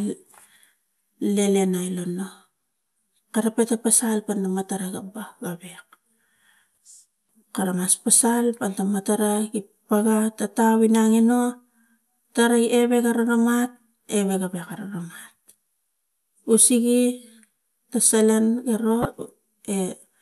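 Corrupt frame decoded at 6.76 s and from 19.02 to 19.05 s, just after "ta salan ero": the decoder played damaged compressed frames, putting energy at wrong frequencies. The first, a single frame, is a barely audible glitch; the second, roughly two frames, is a loud one.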